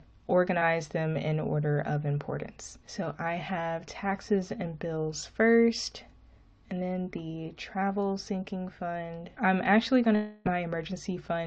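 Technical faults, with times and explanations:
10.15 to 10.47 s, long network dropout: for about 0.3 s the sound becomes a buzzy, fading continuation of what came just before, never reaching silence, then resumes with that stretch missing. The likely cause is a receiver stretching old audio over packets that never arrived.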